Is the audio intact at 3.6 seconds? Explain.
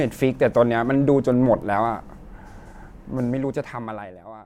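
Yes, the speech at 3.6 seconds is intact, with no audible fault at that moment.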